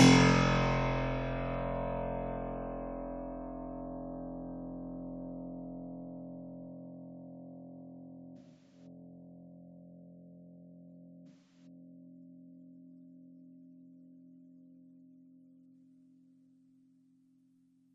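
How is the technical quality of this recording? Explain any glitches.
The recording has two dropouts from AAC frame loss with concealment. At 8.37 to 8.86 s, about 256 ms of frames go missing, which fits roughly six AAC frames, scattered over 341 ms with the longest gap around 150 ms. At 11.27 to 11.66 s, about 213 ms is lost. The decoder patches each gap from the last good spectrum. The sound smears into a noisy, phasey wash, then recovers.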